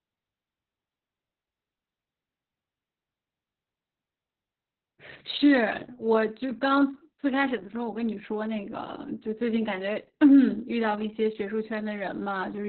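Opus voice compression runs through the whole speech clip, from start to finish, and the damage is heavy. Nothing survives above about 4.3 kHz, so the coder has dropped to its narrowband linear-prediction mode, which fits a bitrate around 6 kbps. At that rate the excitation signal driving the vocal-tract model is coded very coarsely, so the speech sounds muffled and hoarse, with a thin, slightly robotic buzz.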